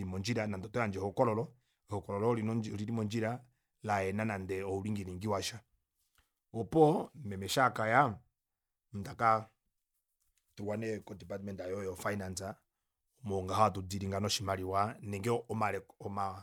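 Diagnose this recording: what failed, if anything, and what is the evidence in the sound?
Nothing failed; no fault can be heard here.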